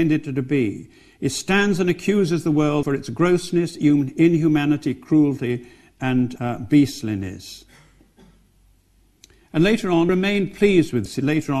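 At 2.82, 6.35, 10.09 and 11.05 s, compressed frames are skipped. The audio jumps ahead by whole 26.1 ms frames, losing about 200, 70, 400 and 150 ms. Unlike a dropout, there is no silent gap.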